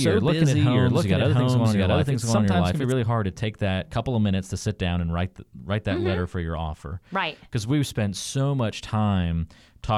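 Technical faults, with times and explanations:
0.0–2.92 s, doubled audio track: the speech is already doubled when the clip opens. A second full-band copy trails the original by roughly 0.7 s at about the same level, so everything is heard twice, with no decay or room colour on the repeat. That points to the audio likely being captured a second time through a slower path. At 2.92 s the late copy cuts off abruptly, leaving a single clean track.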